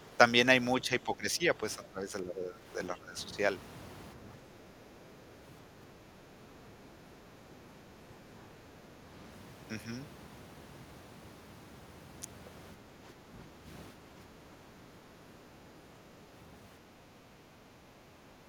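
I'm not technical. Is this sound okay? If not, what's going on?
No. The voice dips at 0.82–2.65, 2.95–3.17, 4.16–4.88, 12.76–13.68 and 13.94–14.44 s, most likely speech suppressed in double talk. The echo canceller turned the talker down along with the other side's echo. Unlike a connection dropout, the voice sinks rather than vanishing cleanly.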